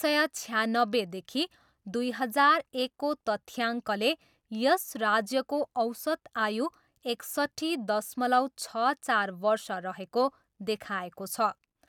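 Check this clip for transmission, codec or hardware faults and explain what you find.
Nothing stood out on listening to this speech clip.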